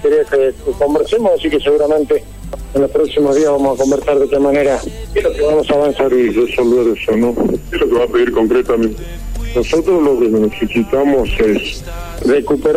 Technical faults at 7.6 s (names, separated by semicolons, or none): section at the wrong speed